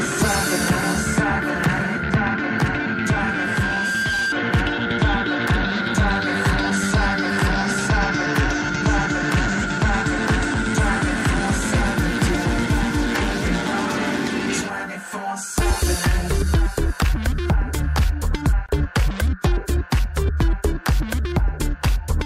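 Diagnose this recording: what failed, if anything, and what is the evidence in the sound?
From 2.40 s a single pure tone near 1.6 kHz creeps in and swells over roughly a second and a half until it sits at about the same loudness as the rest of the sound, then it stops at 4.35 s. This is loudspeaker feedback squeal, an acoustic fault in the analogue stage. A microphone was hearing a loudspeaker it fed, and around 1.6 kHz the round-trip gain passed unity, so that one frequency kept reinforcing itself until it was limited or the loop was broken.

At 18.66 s the sound drops out for about 26 ms and then resumes exactly where it left off, with softened edges on either side of the hole. This is a gap at a join of encoded pieces, a codec-stage fault. Two separately encoded segments were spliced without trimming, so the encoder's start-up delay and the padding of the final frame remained as silence in the middle of continuous audio.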